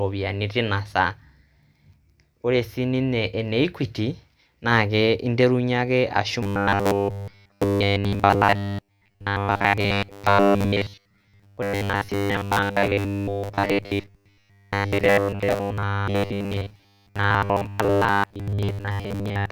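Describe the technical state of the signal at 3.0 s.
Around 3.0 s the signal is intact, with no dropout, clipping, distortion or other audible fault at that point.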